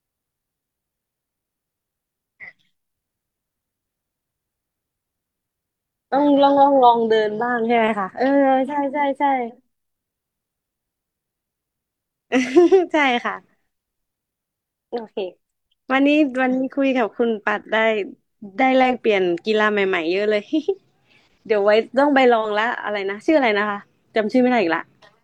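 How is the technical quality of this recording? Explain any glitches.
The speech recording has no audible technical glitches, and the signal stays steady and intact throughout.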